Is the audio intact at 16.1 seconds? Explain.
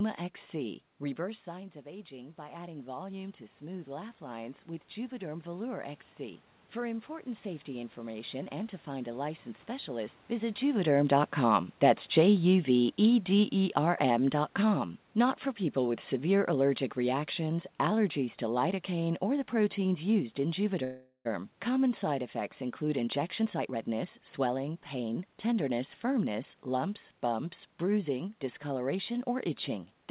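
No, the speech and its background sink together by about 7 dB from 10.62 to 17.24 s, starting just before "allergies to": automatic gain falling, as the gain control lowers its level after finding the input too loud or its background noise too strong.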